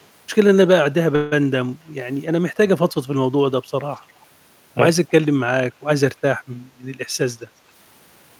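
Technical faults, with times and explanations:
1.15–1.34 s, call audio freeze: Packets were likely held up and the jitter buffer ran dry, so about 160 ms of fading filler sound was inserted before the speech resumed with nothing lost.
3.96–4.00 s and 5.08–5.26 s, echo leak: A far-end echo canceller likely let loudspeaker pickup through, returning a very faint, brief copy of the speech about 280 ms late.
7.22–8.37 s, jitter buffer speed-up: An overfull buffer was trimmed by cutting short pitch-period pieces, removing roughly 150 ms, so the speech runs at 110% speed with unchanged pitch and sounds hurried.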